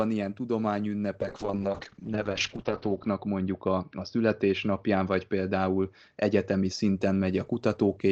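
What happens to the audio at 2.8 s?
At 2.8 s the audio is inside a call bitrate drop that begins at 1.22 s and lasts to the end of the clip. The bandwidth estimate collapsed, so the Opus encoder had to code the speech with far fewer bits: coarser and rougher, with a watery, muffled edge. The sound points to a fall from around 32 kbps to roughly 10 kbps, held at its lowest for 1.86 s. On a spectrogram, energy above 6 kHz disappears beneath a flat, hard ceiling.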